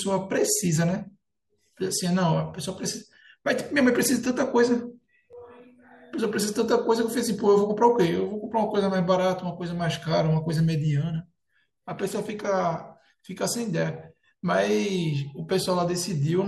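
No technical faults can be heard anywhere in the speech recording; the signal stays steady and intact throughout.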